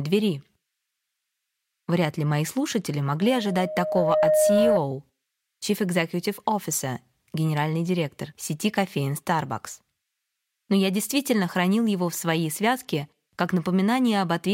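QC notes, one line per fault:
3.20 to 4.80 s, loudspeaker feedback squeal: a steady tone near 617 Hz swells up over roughly a second until it sits about 5 dB above the program. The mic's hearing its own speaker, and at that frequency the loop gain tops one, so it keeps feeding itself.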